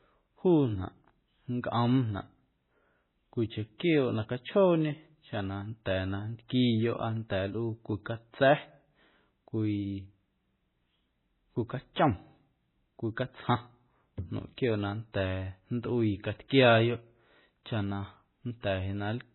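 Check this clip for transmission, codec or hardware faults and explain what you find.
There's one fault, running throughout: heavy MP3 compression, likely. Nothing above 4 kHz survives, and the speech sounds watery and swirly, which fits a starved bitrate around 16 kbps.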